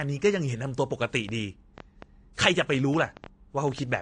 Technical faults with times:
0.00-4.01 transcoding between lossy codecs
1.29-3.97 train of clicks

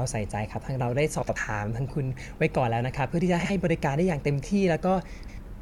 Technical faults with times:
1.22-1.36 frames out of order
3.40-3.50 frames out of order
5.18-5.38 frames out of order

